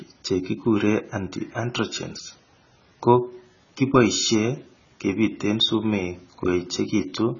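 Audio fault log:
Throughout, AAC compression: the speech sounds dull and smeared, with nothing above 7 kHz and a warbling, fizzy grain on sustained sounds and sibilants. The damage is heavy and fits a likely cause of AAC-LC coding at a very low bitrate, around 16 kbps. With so few bits per frame, the encoder drops the upper band outright and quantises the remaining frequency lines so coarsely that gaps and substitute noise replace real detail.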